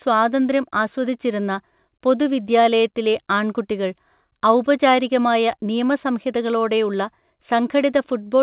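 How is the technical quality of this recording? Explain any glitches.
No glitches can be heard in the recording. The speech comes through a call path with nothing above 4 kHz, which fits a narrowband telephone codec such as G.711 mu-law.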